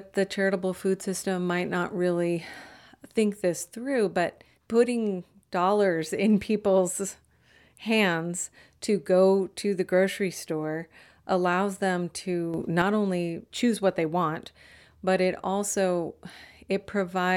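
At 12.54 s the level leaps up by about 6 dB and stays there until 12.82 s: a sudden gain jump. The speech and the background noise rise together, which likely means a digital gain change was applied in one step, without a ramp.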